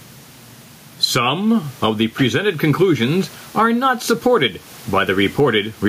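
Gain pumping runs through the whole recording. The level breathes up and down by around 10 dB. The room noise sits about 36 dB below the speech. The cause is likely input gain set far too high, with a fast limiter clamping every loud syllable. Loud and quiet passages end up close in level. The speech sounds squashed and flat.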